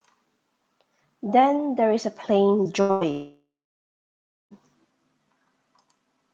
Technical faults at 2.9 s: burst of packet loss

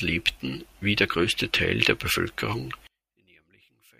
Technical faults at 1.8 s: none

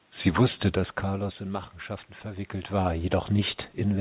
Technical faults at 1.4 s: none

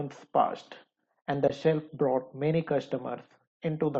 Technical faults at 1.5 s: AAC frame loss with muting

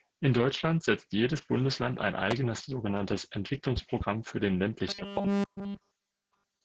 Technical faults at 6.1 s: Opus voice compression; robotic sound from repeated short buffers

